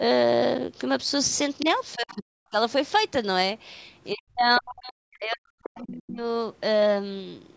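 At 1.6 to 1.66 s and again at 1.93 to 2.12 s, faint scraps of a second voice, the other side's voice leaking through, sit roughly 15 and then 25 dB under the talker. The likely cause is a loudspeaker echo the canceller left behind. On a spectrogram these appear as weak, broken harmonic traces beside the main speech.

From 1.95 to 2.58 s and from 4.13 to 6.2 s, the talker's speech is suppressed in double talk. It sinks by as much as around 40 dB, likely because the canceller could not separate near speech from echo while both sides spoke. The waveform shows the envelope collapsing in those stretches, and the spectrogram shows energy thinning, all under the call processing's limit of nothing above 8 kHz.

Inside the second dip, at 5.75 to 5.84 s, another brief leak of the other side comes through at about 25 dB below speech.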